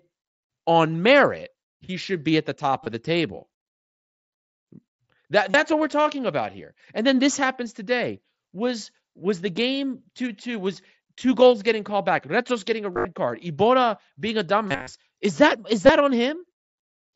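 Concealed Bluetooth headset packet loss appears at 2.84 s, 5.51 to 5.54 s, 12.93 to 13.05 s, 14.67 to 14.87 s and 15.87 s. Lost headset packets were replaced by repeating recent waveform. The short gaps are nearly hidden, while the longer runs (up to 60 ms) become a buzzy, full-level tone that warbles as real audio resumes, not silent dropouts. The mSBC wideband link carries the speech up to 8 kHz.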